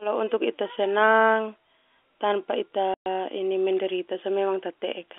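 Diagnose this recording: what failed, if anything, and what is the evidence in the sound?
The network stage dropped a run of packets, and the receiver filled the gap with silence. The speech cuts out completely from 2.94 to 3.06 s. That 120 ms hole fits six 20 ms packets, and its edges are abrupt against the narrowband G.711 telephone line.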